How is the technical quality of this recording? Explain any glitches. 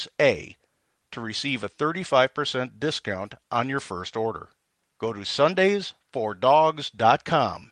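No glitches can be heard in this speech recording. It has passed through a call codec and jitter buffer, and the top end stops at around 12 kHz, which fits Opus at about 32 kbps.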